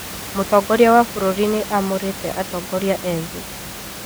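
No technical faults occur anywhere in this speech clip, and the room noise sits about 14 dB below the speech as part of the recording.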